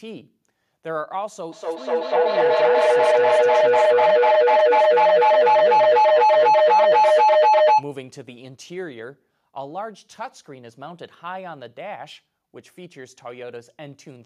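Feedback howl runs from 1.52 to 7.9 s in this speech clip, peaking about 16 dB above the speech. A microphone-to-loudspeaker loop between two devices sharing a room gains level each pass, narrowing to a tone near 1 kHz, with the loop repeating roughly every 200 ms.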